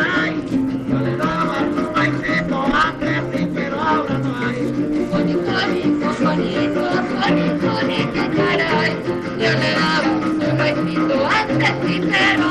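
At 9.99 s a brief burst of damaged data in the compressed stream breaks through, lasting until 10.05 s. It is heard as a short chirp, squawk, click or hole, about 56 ms long. A stretch of the encoded bitstream was corrupted. The decoder could not read those frames correctly. It lost its place in the stream and had to hunt for the next valid frame header before normal playback resumed.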